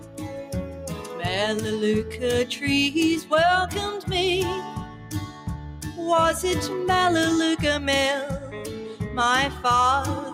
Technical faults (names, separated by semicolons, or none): noise suppressor applied to music or sounds; sound cut by the noise suppressor